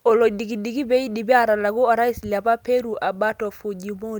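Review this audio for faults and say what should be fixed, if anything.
Nothing here needs fixing; the speech comes through without any technical faults worth flagging.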